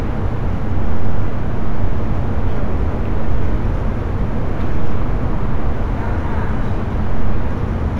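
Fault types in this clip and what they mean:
Imaging from linear upsampling, throughout: the audio was raised in rate by joining samples with straight lines, which fits a 16 kHz source brought up to 44.1 kHz. That crude filter softens the top of the original band and leaves faint mirror copies above it, the first spanning 8 to 16 kHz, roughly 50 dB below the signal. Those copies add a light metallic shimmer to sharp, bright sounds.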